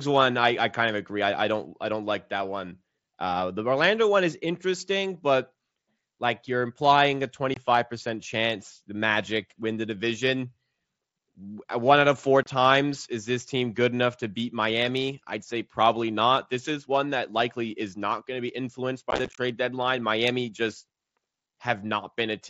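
Short holes with hard, abrupt edges break the speech at 7.54 to 7.57 s and 12.43 to 12.46 s, and a rough, chopped crackle runs from 19.1 to 19.38 s. This is unconcealed Bluetooth headset packet loss: headset voice packets never arrived and were replaced with silence or an idle pattern, with no attempt to patch over the gaps.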